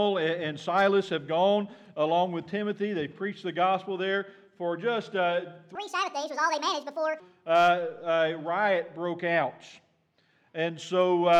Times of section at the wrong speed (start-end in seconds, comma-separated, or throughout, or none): 5.75-7.20